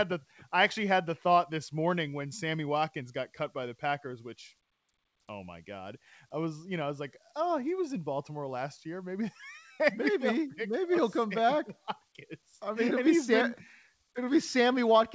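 No technical faults are audible.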